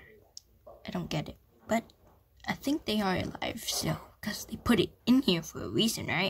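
Nothing here stands out as a technical fault; it's all just the sound as it is, with nothing going wrong along the way.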